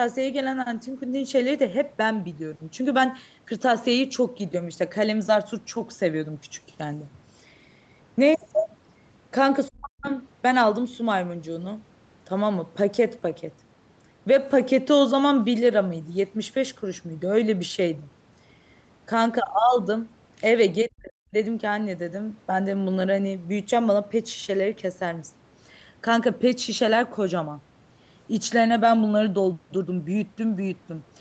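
From 9.69 to 10.1 s and again from 20.88 to 21.35 s the speech drops sharply by about 40 dB and nearly vanishes, likely speech suppressed in double talk, where the echo canceller mistook overlapping talk for echo. Each shows as a brief hollow in the waveform and a near-blank band across the spectrogram.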